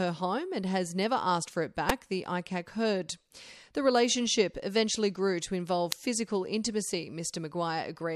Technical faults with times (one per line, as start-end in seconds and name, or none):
1.89 electrical switching spike
5.92 electrical switching spike